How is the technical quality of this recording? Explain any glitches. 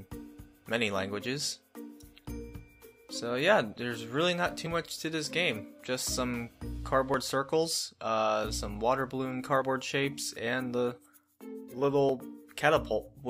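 The recording has one recurring glitch: audio missing between chunks, at 2.19, 4.66, 7.14, 9.62 and 12.09 s. The recorder likely handles the audio in blocks of about 2.5 s and drops a small slice at each handover. Roughly 20 ms vanishes each time, and the two sides are joined directly with no silence. What you hear is a brief, regular skip every two and a half seconds, where the sound jumps slightly forward.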